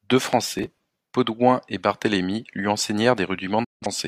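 At 0.33 s a single loud pop lands on the speech. It peaks at about 10 dB above the signal and lasts about 20 ms. A sudden voltage step entered the chain, most likely from a plug, switch or static discharge. The circuits downstream shaped it into one sharp click-thump. The speech keeps going underneath it.

From 0.59 s to 0.99 s there is processor overload crackle. The processor fell behind and missed its deadlines over and over. The buffers sound like roughly 5 ms each, and around thirty of them were missed. Each missed buffer was skipped, which left a small gap with hard edges. Together the gaps make a gritty, tearing crackle over the speech. It stops when the load eases.

From 3.64 s to 3.86 s there is a digital broadcast dropout. The receiver lost good frames and muted. The speech fades out in about 8 ms and stays silent for roughly 171 ms. That fits four lost frames. What was sent during that time is gone. 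The sound then returns further into the programme.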